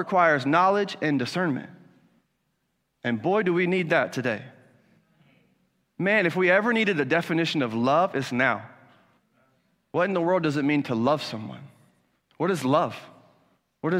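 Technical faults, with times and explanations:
No technical faults can be heard in this speech recording.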